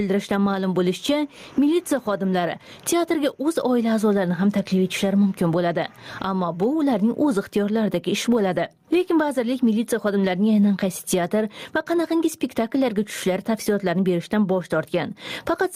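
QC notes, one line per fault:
Throughout, gain pumping: the level is pulled down on each loud sound, a swing of around 15 dB, leaving loud and soft parts squashed together. The likely cause is gain set far too high, with a fast limiter clamping each peak.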